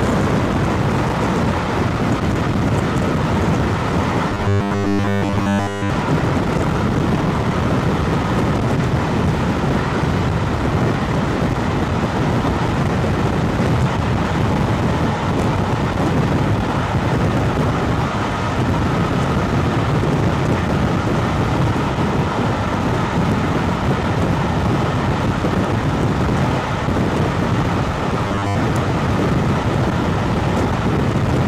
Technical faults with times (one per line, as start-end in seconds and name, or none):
4.30-5.90 robotic sound from repeated short buffers
11.50-11.54 chunks out of order
28.25-28.56 robotic sound from repeated short buffers